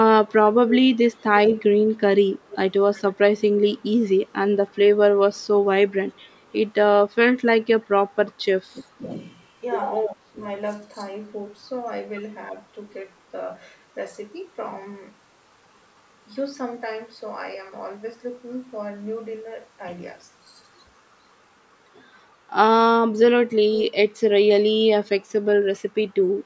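From 0.29 to 4.79 s, a faint, delayed double trails the speech, arriving about a third of a second (313 ms) after it and sitting roughly 15 dB below it, so it reads as a ghost. This is an echo leak, likely from a far end playing the call over a loudspeaker whose echo canceller let part of the microphone pickup through and return it down the line.

At 8.72 to 9.07 s and again at 10.06 to 10.42 s, the speech suddenly sinks for a moment, each time for around a third of a second. The first dip is deep, around 30 dB, nearly a dropout, and the second shallower, around 20 dB. This pattern is speech suppressed in double talk, likely caused by an echo canceller that, with both sides talking at once, could not tell the talker from loudspeaker echo and ducked everything.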